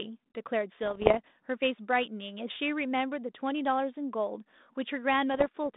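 From 0.85 to 1.19 s, and again from 5.34 to 5.47 s, the narrowband speech, held within about 200 Hz to 3.7 kHz by a light ADPCM coding consistent with 32 kbit/s G.726, breaks into pops and gritty bursts: bit errors on an ADPCM link, under one percent of bits in the first burst and around half a percent in the second. Each flipped bit throws off the decoder's predictor and step size, so the error rings on briefly. The waveform shows spikes and jumps in level, and the spectrogram shows vertical broadband streaks.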